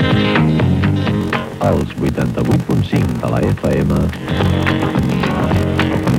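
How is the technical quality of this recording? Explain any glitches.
The technical quality is poor from 1.19 s onward. A steady buzz at about 46.9 Hz appears and continues to the end, and the sound plays slower, at 0.861 times normal speed, with nearly unchanged pitch. This is a block size mismatch (padded): each read block, consistent with 1024 samples, is only partly filled, and the remaining roughly 14% is padded with zeros. Those silent gaps repeat at the block rate, producing the buzz and stretching the timing.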